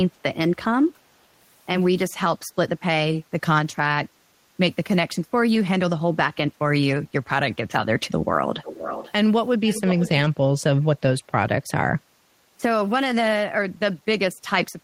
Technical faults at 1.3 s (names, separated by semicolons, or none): none